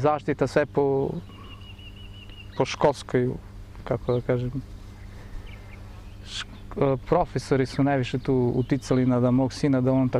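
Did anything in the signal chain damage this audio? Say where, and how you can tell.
Yes. Mains hum sits in the analogue wiring stage. A steady low tone at 50 Hz runs under the whole clip, roughly 20 dB below the sound, with low harmonics. A ground loop or nearby transformer is coupling the power line into the signal.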